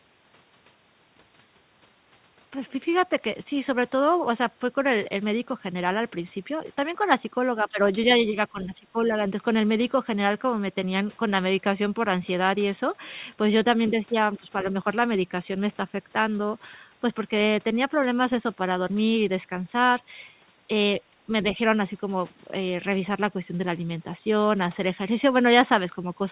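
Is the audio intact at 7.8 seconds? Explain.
No, the sound dips from 7.71 to 7.79 s, by about 10 dB at its deepest. This is speech suppressed in double talk, likely from the echo canceller turning the near talker down with the far-end echo. Unlike a packet-loss gap, it is a dip, not a hard silence.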